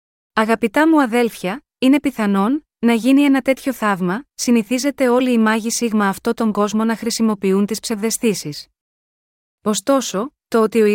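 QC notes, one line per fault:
Nothing to flag here; the speech came through without any faults I could hear.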